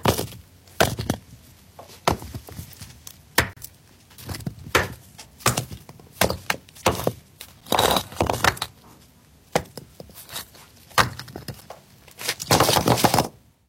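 Three gaps between stream segments cut the sound at 3.53 to 3.57 s, 7.61 s and 11.61 s. Mismatched segment timing leaves hard-edged silences, about every 4 s.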